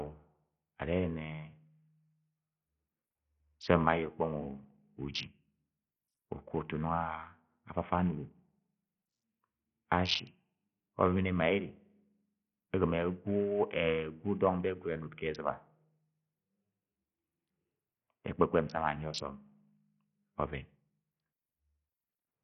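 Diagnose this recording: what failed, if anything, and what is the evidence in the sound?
What failed is the codec stage, and it runs the whole clip. The speech carries a gritty, grainy edge from start to finish, and the top end sounds starved and unsteady rather than cleanly cut. That's likely Bluetooth SBC compression at a low bit pool, consistent with a bitrate around 48 kbps. SBC splits the audio into sub-bands and hands out bits with no hearing model, so at this rate the upper bands go hungry and everything gets coarsely quantised.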